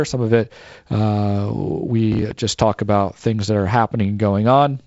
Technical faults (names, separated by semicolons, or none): processor overload crackle